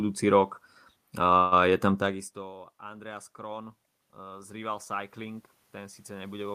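At 1.37 s, just before "je tam takisto", there is a call audio freeze lasting about 0.16 s. The last sound is stretched into a brief fading buzz, likely because packets were held up and the jitter buffer ran empty. Unlike a dropout, nothing is lost: the audio resumes where it stopped, about 143 ms later.

From 2.80 s, after "je tam takisto", to the end, automatic gain rising is heard. The input had fallen by about 23 dB, and the gain climbs gradually to compensate. It differs from the talker moving around 2.0 s because the room noise swells along with the voice.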